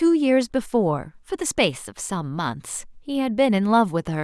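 Nothing goes wrong anywhere in this bit of speech, so there's no problem to point to at any moment.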